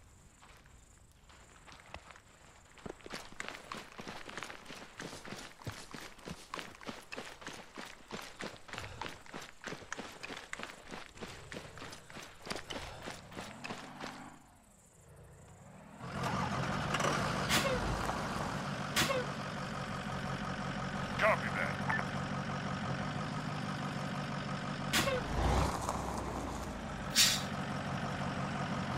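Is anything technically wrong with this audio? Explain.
No, nothing is technically wrong with this audio.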